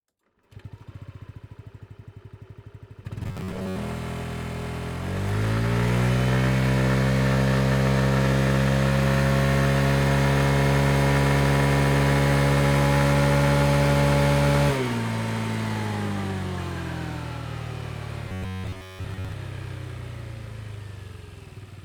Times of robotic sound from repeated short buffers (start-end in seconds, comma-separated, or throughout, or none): 3.23-3.76, 18.29-19.32